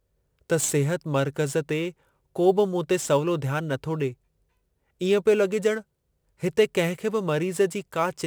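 From start to finish the speech carries crude rate conversion: samples appear to have been dropped or repeated to reach the new rate, with no smoothing filter, which fits a 48 kHz to 44.1 kHz change. The resulting error sits about 25 dB below the speech and forms shifted, inharmonic copies of it, a gritty, inharmonic fizz riding on loud and sibilant sounds. Unlike plain quantisation hiss, it tracks the speech and vanishes in pauses.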